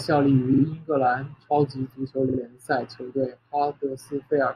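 Repeated frames at 0.53 to 0.62 s and 2.29 to 2.38 s: a 46.4 ms block, consistent with a pair of compressed frames, replays twice, stuttering the speech and adding 92.9 ms each time.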